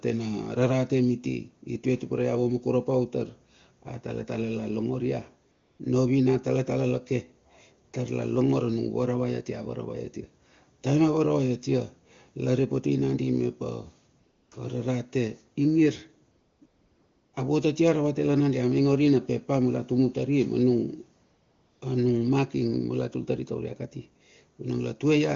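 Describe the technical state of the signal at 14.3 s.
At 14.3 s the signal is AMR comfort noise, spanning 14.19 to 14.51 s. For 320 ms no speech frames arrive, so the receiver substitutes synthetic noise built from a rough level-and-spectrum estimate. It sounds like a smooth, steady hiss, and it shows as a flat, uniform waveform band and an even, featureless spectrogram smear.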